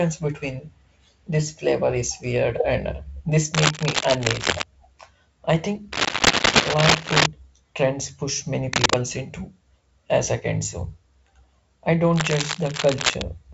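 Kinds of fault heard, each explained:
Cable scratch noise: dense, uneven rustling bursts as loud as the speech or louder, likely from a worn connector being moved; unlike hiss, they start and stop abruptly.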